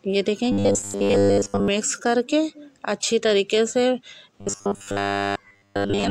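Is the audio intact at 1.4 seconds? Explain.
No. From 0.52 to 1.68 s there is robotic sound from repeated short buffers, likely because fresh audio arrived too seldom and a roughly 10 ms chunk was looped over most of that stretch. The looping stamps a fixed 100 Hz pitch on the sound, a rigid metallic buzz.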